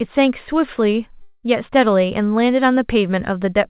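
From 1.22 to 1.46 s the speech gives way to a buzzy, fading continuation of the preceding sound that never reaches silence, then resumes with about 0.21 s missing. This is likely a long network dropout, with the receiver concealing the gap.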